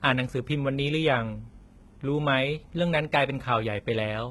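A speech clip with heavy HE-AAC compression damage from start to finish: the top end sounds synthetic, sibilants come out gritty and lispy, and nothing survives above about 11.8 kHz. That's likely spectral band replication at work, which fits a very low bitrate around 16 kbps.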